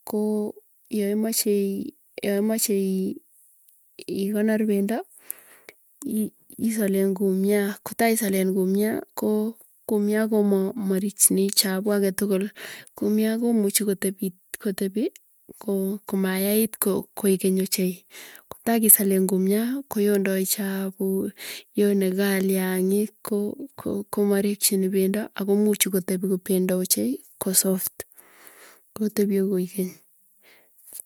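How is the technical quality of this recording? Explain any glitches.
Listening through the recording, nothing in it stood out as a technical problem, so there are no glitches to explain.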